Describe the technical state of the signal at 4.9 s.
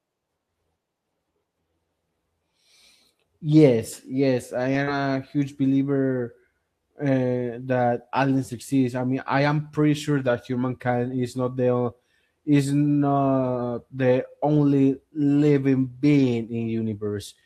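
Just after "yes I", from 4.83 to 4.89 s, about 40 ms of audio arrived too late and was concealed: the decoder extended the preceding sound, heard as a short smear. From 4.87 to 4.89 s, just before "a huge believer", the lost packet was rebuilt from error correction, a 20 ms low-bitrate copy that fits a single lost packet and sounds rougher and noisier.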